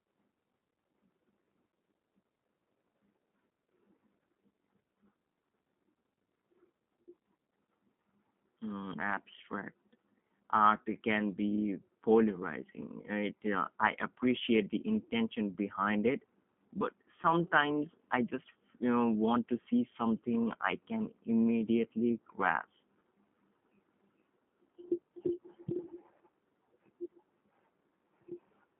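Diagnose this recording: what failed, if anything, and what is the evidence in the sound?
G.729 codec damage throughout, from the codec stage: the speech sounds rough and synthetic, with nothing above 3.8 kHz, which fits 8 kbit/s filter-and-pulse resynthesis.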